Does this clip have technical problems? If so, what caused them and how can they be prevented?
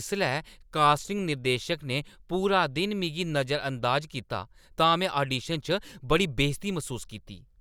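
No, the speech in this clip comes through without any audible technical fault, so there is nothing here to trace to a cause or prevent.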